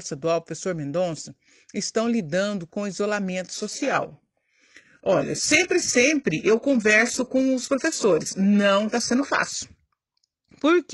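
At 3.54 s the speech drops abruptly to a lower-quality rendition, with no gap. This is an adaptive stream at a lower bitrate. Codec smearing rises, which fits a shift from about 96 to 12 kbit/s. Full quality returns at 9.54 s.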